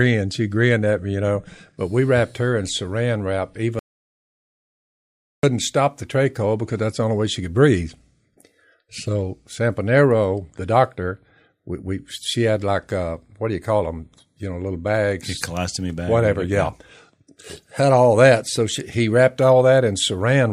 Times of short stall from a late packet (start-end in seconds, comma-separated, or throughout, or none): none